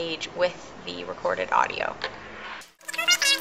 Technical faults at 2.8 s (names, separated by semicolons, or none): wrong sample rate